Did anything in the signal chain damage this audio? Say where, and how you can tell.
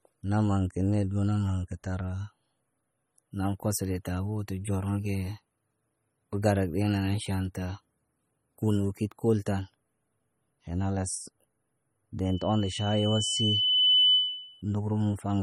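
Yes, in two places. MP3 compression runs through the whole speech clip, at the codec stage. The damage is plainly audible: a watery, swirling texture where weak frequency components flicker on and off from frame to frame, with nothing above 17.3 kHz. This is likely an MP3 encode, and the amount of artefacting fits a low bitrate of about 32 kbps. Starved of bits, the encoder discarded detail and cut the treble at a fixed frequency.

A loudspeaker feedback squeal runs from 12.25 s to 14.62 s and comes from the acoustic path between loudspeaker and microphone. A single 3 kHz tone swells over about a second and a half and settles at around 10 dB above the speech. The microphone picked up the loudspeaker it was feeding, and at 3 kHz the loop gain exceeded one. That frequency kept growing on its own until it was limited or the loop was broken.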